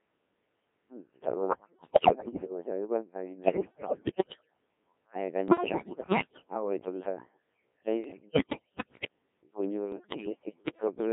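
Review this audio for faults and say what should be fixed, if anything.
The speech sounds robotic and buzzy throughout, squeezed into a band of roughly 200 Hz to 3.5 kHz. This is the Codec 2 vocoder, which sends only pitch, voicing, energy and spectral shape, then rebuilds the speech from sine waves. The heavy damage fits a rate near 1.3 kbit/s. Sending at a higher Codec 2 mode, or using a waveform codec where bandwidth allows, would prevent it.

Five bursts of bleeps, warbles and sudden jumps in pitch, level and tone colour occur at 1.48–2.52 s, 3.44–4.47 s, 5.48–6.54 s, 8.04–9.08 s and 9.92–10.87 s. These are bit errors on digital voice radio. The corrupted bits reach the decoder and scramble each frame's parameters. Around a fifth of the bits are flipped in the worst bursts, and fewer in the last one. A stronger signal margin or added forward error correction on the link would prevent this.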